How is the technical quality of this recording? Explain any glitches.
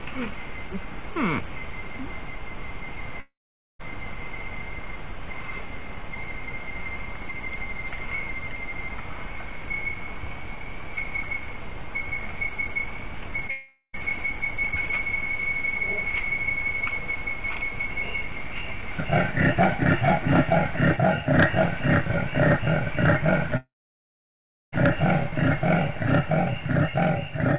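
The recording has four audible interruptions: three long network dropouts and one short concealed packet loss. All of it is narrowband, with nothing above 4 kHz, which fits a G.711 A-law call path at 64 kbps.

Long network dropouts occur at 3.20–3.81 s, 13.50–13.99 s and 23.57–24.74 s. Roughly 0.6 s, 0.44 s and 1.16 s of audio never arrive. Each time, the last sound is stretched into a fading buzz or hiss, then goes silent for about 0.47 s, 0.09 s and 1.04 s respectively. The sound then resumes further on, with the lost stretch simply gone. The likely cause is a network stall long enough that concealment runs out. That run-out into silence is what separates these from a short loss.

A short concealed packet loss occurs at 13.47–13.50 s, just before the second dropout. About 20 ms failed to reach the decoder, and the receiver extrapolated the preceding sound to cover it. It is heard as a brief smear or wobble rather than a gap. 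Unlike the dropouts, the fill never decays into silence, and the sound continues without a hole.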